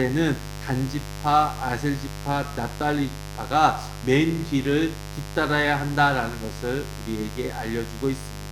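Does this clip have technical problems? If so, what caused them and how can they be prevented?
Yes. A mains buzz runs through the whole clip, strong enough to sit only about 10 dB below the wanted sound. Its fundamental is 50 Hz, but it sounds raspy rather than like a pure hum because sharp switching spikes, arriving twice per mains cycle, spread harmonics of 50 Hz well up into the kilohertz range. This points to interference from a dimmer, a rectifying power supply or an unshielded cable coupling into the signal path. To prevent it, keep dimmers and switch-mode supplies off the recording circuit and use properly shielded, balanced cabling with a single ground point.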